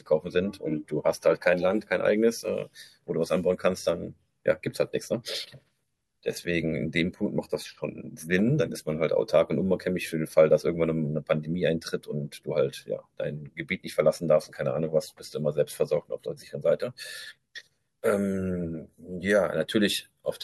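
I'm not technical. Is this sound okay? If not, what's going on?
Yes, it's fine: nothing in this recording sounds wrong, so you can just listen and enjoy it.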